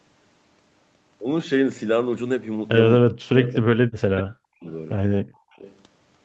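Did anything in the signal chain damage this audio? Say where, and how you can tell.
Yes. In the call processing stage, the echo canceller likely mistook double talk for echo between 3.0 and 4.66 s and turned this side down with it. This is speech suppressed in double talk: about 1.5 s of speech dips, by about 40 dB at worst, or breaks up in pieces.

An echo canceller, likely on the side playing the call on a loudspeaker, let an echo leak through at 3.43–3.5 s, 4.19–4.23 s, 4.68–4.72 s and 5.52–5.76 s. Each is a faint, delayed copy of the speech trailing by 272 to 281 ms, mostly about 20 to 25 dB below it and about 40 dB down at 4.68 s.

The background was gated by the echo canceller from 5.22 to 5.52 s. While it treated the loudspeaker as active, it clamped the microphone hard, and the room tone drops by about 24 dB for roughly 300 ms, then comes back just as the last echo scrap starts.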